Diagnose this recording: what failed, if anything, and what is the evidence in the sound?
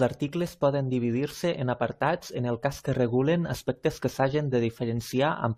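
Nothing failed: no stage in the chain, from wiring and conversion through processing, transport, storage and playback, leaves any audible trace in the speech.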